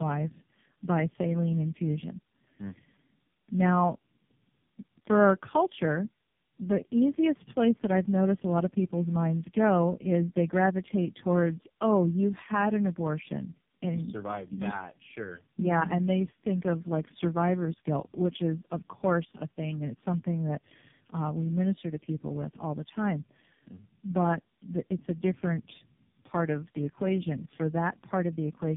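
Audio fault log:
Throughout: tandem speech coding. The speech went through three low-rate speech coders in a row, each re-coding the last one's damaged output. The roughness points to a GSM full-rate stage followed by two AMR-NB stages, the last near 5.9 kbit/s, with G.711 A-law links between them. The errors pile up, so the speech sounds gritty, muffled and warbly. Nothing remains above 3.7 kHz, which dulls it further.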